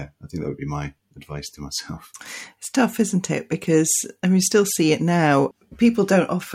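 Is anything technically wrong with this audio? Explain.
No, nothing in this speech recording points to a technical problem with the signal.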